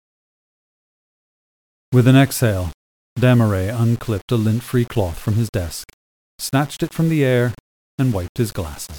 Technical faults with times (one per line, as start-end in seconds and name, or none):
0.00-8.99 low bit depth without dither